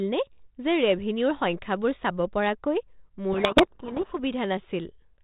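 From 3.32 to 4.19 s the receiver unpacks the G.726 code words with their bits in the wrong order, a codec payload misread, so the difference values are decoded wrongly and the predictor wanders. The speech is buried in harsh, rasping distortion until the packing agrees again.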